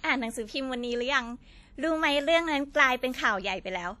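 From start to end, the speech carries a ringing, washy smear, with a hiss that swells and fades with the voice, likely WMA compression at a bitrate around 48 kbps. Unlike steady background noise, this hiss tracks the signal and blurs consonants over long blocks.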